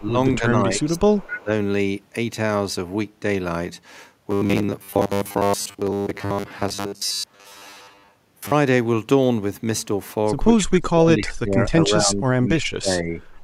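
From 0.0 to 0.17 s and 0.39 to 1.51 s, the speech dips by roughly 10 dB and then by up to about 20 dB, likely speech suppressed in double talk. An echo canceller ducks the talker while the far side also speaks. Unlike a dropout, the level sags and recovers rather than cutting cleanly.

Inside that stretch, at 0.79 to 1.0 s and 1.17 to 1.42 s, a faint delayed copy trails the sound by 252 ms. It sits about 25 and then 15 dB below the original. This is likely echo leak, with loudspeaker pickup escaping cancellation. It is an added repeat, not a loss.

From 4.31 to 8.53 s the sound turns into a rigid metallic buzz at a fixed 100 Hz. The cause is likely robotic sound from repeated short buffers, where most of the audio is replaced by loops that fit a 10 ms buffer. The constant pitch, not gaps, is what gives it away.

At 10.56 to 12.35 s and 12.53 to 13.21 s, speech suppressed in double talk likely returns, deeper this time at about 25 to 30 dB. 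The talker fades or breaks up in pieces.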